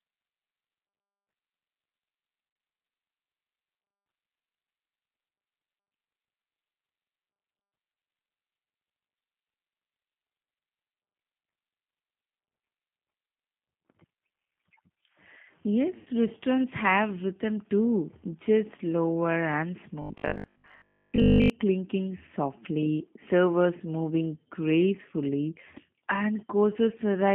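Across the whole clip the speech carries the G.729 codec at 8 kbit/s, inside a telephone band of roughly 150 Hz to 3.5 kHz. The codec damage is plainly audible. Each 10 ms frame is rebuilt from a vocal-tract filter, a pitch predictor and a handful of pulses, so the voice comes through intelligible but rough and slightly synthetic. Nothing above the band survives, which gives the flat, narrow telephone timbre.

From 2.50 to 2.62 s there is VoIP packet loss concealed by the speech codec. About 70 ms of audio is missing, scattered over that 120 ms window, and the longest single gap is 30 ms. This fits several lost 10 ms frames. The decoder fills each hole by extending its last pitch and filter at falling gain, so the speech is briefly stretched and dips, then takes a moment to recover. The same concealment appears from 15.98 to 16.09 s, covering about 80 ms just before "restaurants have rhythm too", and leaves those first syllables weak and smeared.

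From 20.02 to 21.50 s, ending just before "clinking softly servers moving", the voice becomes robotic sound from repeated short buffers. A rigid, metallic 50 Hz buzz sits on the speech for most of this stretch while it still loosely follows the words. The 50 Hz figure corresponds to a repeat every 20 ms, so the likely cause is fresh audio arriving too seldom and the playback repeating its last 20 ms segment in place of the skipped material.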